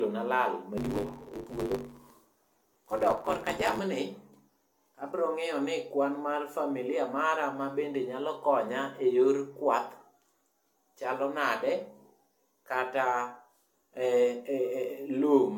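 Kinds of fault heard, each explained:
generation loss: Likely repeated AAC-LC re-encoding, around five passes, each adding fresh quantisation. The speech sounds swirly and hollow, attacks smear, and nothing remains above 17 kHz.
block size mismatch (truncated): Each block's tail is discarded downstream, consistent with 512-sample writes. From 0.77 to 3.79 s a 100 Hz buzz appears and speech runs 1.16 times faster.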